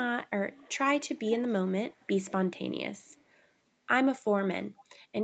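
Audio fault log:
0.57–0.78, 1.0–1.42, 1.91–2.32, 3.43–3.48 and 4.8–4.84 s: echo leak. A faint copy of the speech returns about 0.38 s late. It is loudest at 1.0–1.42 s, about 15 dB down. A loudspeaker's echo canceller likely let residual pickup through.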